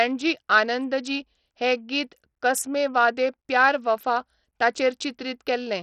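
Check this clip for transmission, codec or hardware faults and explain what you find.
The speech carries codec damage for its whole length, most likely Bluetooth SBC compression. The top band ends at 14.7 kHz, and the treble below it flickers and sounds gritty. That fits a starved bit pool, near 64 kbps, with coarsely quantised sub-bands. A spectrogram would show a hard ceiling with patchy, blocky energy beneath it.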